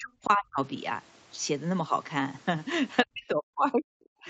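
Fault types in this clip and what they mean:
Speech suppressed in double talk: the speech drops by roughly 40 dB at its deepest, for about half a second within the first 0.59 s and again from 3.04 s to the end, likely an echo canceller muting the near talker during simultaneous talk.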